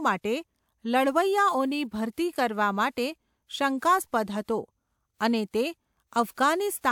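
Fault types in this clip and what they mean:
No technical faults can be heard in the recording; the signal stays intact and steady throughout.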